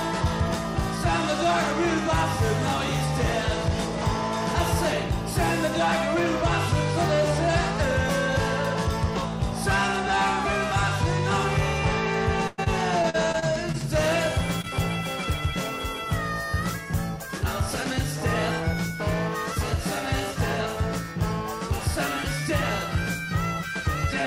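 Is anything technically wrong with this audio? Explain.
Yes. Between 12.47 and 13.76 s there is repeated packet loss, giving a robotic sound. Gaps recur, each patched by extending earlier audio. The longest is 104 ms, and about a fifth of the stretch is filled in.

From 14.62 to 14.65 s there is a short concealed packet loss. About 20 ms never arrived and was synthesised from the preceding sound, leaving a brief smear.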